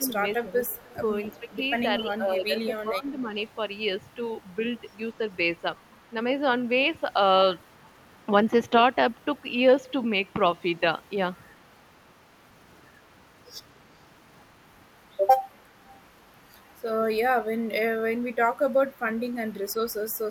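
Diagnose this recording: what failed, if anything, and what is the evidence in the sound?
Speech suppressed in double talk at the call-processing stage: the echo canceller likely clamped down, dipping speech up to about 15 dB across 0–3.34 s.

Echo leak in call processing: the canceller likely passed echo, 259 ms late and about 30–40 dB down, at 0.76, 2.61, 4.43, 5.92, 11.6 and 18.33 s.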